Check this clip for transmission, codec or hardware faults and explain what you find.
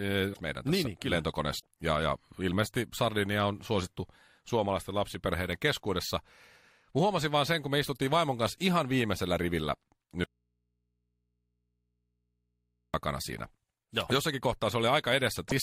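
The clip has two kinds of fault: three bursts of damaged data in the compressed stream and one long audio dropout to a faint residue.

Damaged data in a compressed stream shows up at 0.30–0.40 s, at 1.56–1.66 s just after "niin niin", and at 15.45–15.52 s. Corrupted bytes make the decoder misread frames, lose sync and hunt for the next valid header, so each spot gives a short squawk or blip. On a spectrogram each appears as a brief broadband smear breaking the speech harmonics. The waveform shows a jagged discontinuity.

An audio dropout to a faint residue runs from 10.24 to 12.94 s, right after "kanssa ihan viimeisellä rivillä", and loses 2.7 s of speech. The speech stops abruptly and the gap holds only mains hum at about 50 dB below the signal. The likely cause is a signal break upstream while the later input stayed open and picked up the hum. The waveform collapses to a near-flat line with sharp edges at both ends, and the spectrogram shows only thin horizontal hum lines at the low end.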